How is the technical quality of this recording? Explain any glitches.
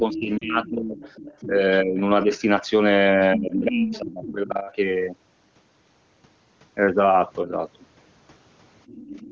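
The recording has echo-control trouble around 0 to 4.7 s and again at the very end, plus two short decoder glitches. The audio comes through a wideband phone path, with the band reaching up to about 7 kHz as HD Voice does, and the coding sounds consistent with a high AMR-WB rate near 23.85 kbit/s.

Speech suppressed in double talk: From 0 to 2.3 s and again from 3.17 to 4.66 s, the talker's level repeatedly sinks, by about 20 dB at its deepest, for roughly a second in total within each stretch. A shorter dip of about 10 dB follows at 7.43 to 7.52 s. This is likely the echo canceller mistaking simultaneous talk for loudspeaker echo and attenuating everything on the microphone side.

Other side's voice leaking through: A second voice sits under the talker from 0.13 to 1.46 s at about 15 dB below. It rises to only about 5 dB below from 3.71 to 4.33 s, where it nearly competes. A faint scrap appears at 2.34 to 2.39 s, and it returns at about 20 dB below from 8.87 s to the end. 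The likely cause is far-end audio from the loudspeaker that the echo canceller failed to fully subtract from the microphone signal.

Lost AMR speech frames: At 0.38 to 0.45 s, a brief drop to near silence replaces about 40 ms of sound, which fits two consecutive 20 ms frames. A single shorter dip occurs at 3.48 to 3.52 s, fitting one frame. Radio errors corrupted these frames, so the AMR decoder repeated the last good pitch and spectral settings at decaying gain. The voice then comes back weak or rough for a moment.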